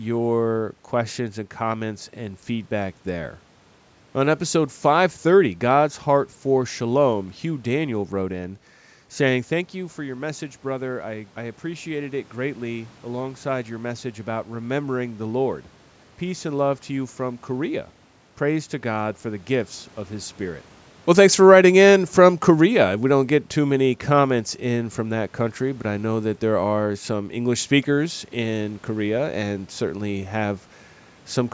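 From 21.03 to 24.41 s, automatic gain falling lowers the level by about 5 dB. Unlike the talker moving away, the room noise sinks together with the speech.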